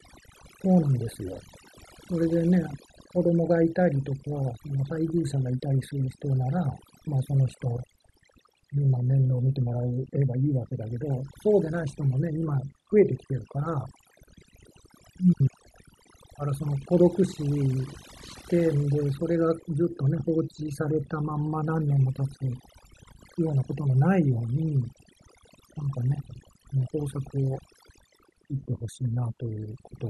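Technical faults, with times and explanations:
Throughout, overdone noise removal: heavy noise reduction mutes bands near the noise floor, leaving near-silent gaps with twinkling specks, and quiet parts of the speech are lost along with them.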